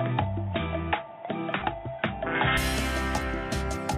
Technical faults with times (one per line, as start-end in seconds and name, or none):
0.00-2.57 input switched to a poorer device
1.60-1.62 lost LE Audio frames